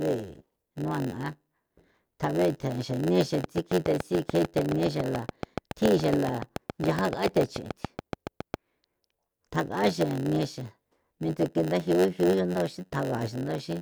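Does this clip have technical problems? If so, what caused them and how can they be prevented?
Yes. A block size mismatch (padded) runs through the whole speech clip. One stage writes shorter blocks than the next reads. Zeros fill each gap. This adds a buzz at 91.9 Hz. The speech plays at 0.919 times normal speed, yet keeps its timbre. Setting every stage to the same block size prevents this.

A train of clicks runs from 3.44 to 8.55 s. About forty regular clicks arrive at 7.69 per second. They sit well above the speech and tick through the pauses too. Interference from nearby equipment or a faulty connection is the likely cause. Shielding cables and securing connections prevents it.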